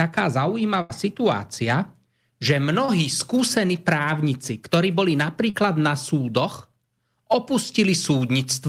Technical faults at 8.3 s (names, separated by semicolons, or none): none